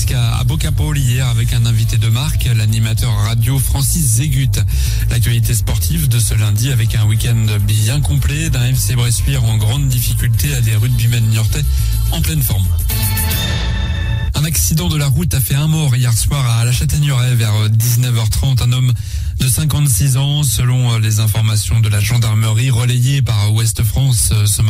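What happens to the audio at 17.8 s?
At 17.8 s, the audio is inside a span of crude rate conversion, from 16.72 to 18.68 s. The rate was raised by simply repeating nearest samples, which fits a 44.1 kHz to 48 kHz change. That leaves a gritty, inharmonic fizz about 25 dB under the sound.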